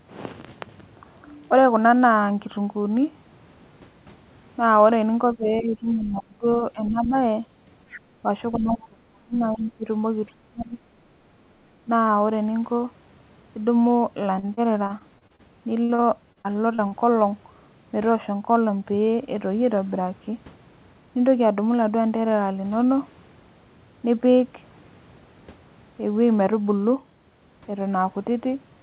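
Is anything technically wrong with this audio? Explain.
Yes. Three kinds of fault appear, all between about 5 and 17 seconds.

Speech suppressed in double talk occurs at 5.35 to 6.47 s, 6.73 to 7.15 s, 8.54 to 9.85 s, 10.28 to 10.8 s and briefly at 11.85 s. This is likely an echo canceller that, with both ends talking together, could not tell the near talker from loudspeaker echo and pulled everything down. The voice sinks by up to roughly 35 dB, dipping or breaking off in pieces across these stretches.

The other side's voice leaking through appears as short scraps at 5.48 to 5.6 s, 5.85 to 6.08 s and 7.89 to 7.99 s. The far-end talker was played on a loudspeaker and was likely not fully cancelled from the microphone, so faint fragments of a second voice slip in, roughly 20 to 35 dB below the main speech.

Repeated packet loss (robotic sound) affects 14.39 to 15.42 s and 15.84 to 16.94 s, with eight gaps in each stretch. 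Packets kept going missing, and each hole was patched by extending the preceding sound, covering about a fifth of each span. The longest gaps are 36 ms and 52 ms. The result is choppy, robotic audio with small pieces missing.

The narrow, telephone-like bandwidth, with nothing above 4 kHz, comes from the G.711 call codec and is expected.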